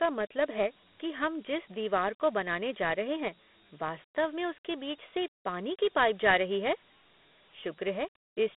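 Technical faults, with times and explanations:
Throughout, Dialogic VOX ADPCM: speech squeezed into 4-bit ADPCM, which fits 32 kbps, leaves gritty hiss tracking the voice, with a 200 Hz to 3.5 kHz line band and nothing above 3.8 kHz.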